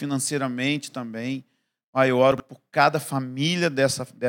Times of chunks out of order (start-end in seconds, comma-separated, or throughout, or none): 2.32-2.40